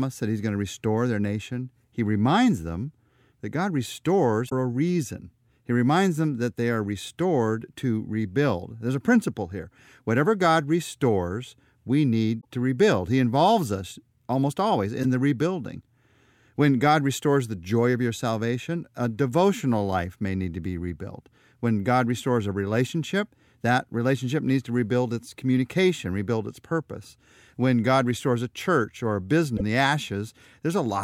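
Four short glitches break up the speech, at 4.46 to 4.53 s just before "a reason", 12.37 to 12.45 s, 15.03 to 15.05 s between "involves us almost always" and "the rebuilding", and 29.53 to 29.61 s right after "a church or a". Each is damaged data in the compressed stream. The decoder hits bad bytes, loses frame sync and hunts for the next header, so you get a quick chirp, squawk, click or short hole lasting a few tens of milliseconds.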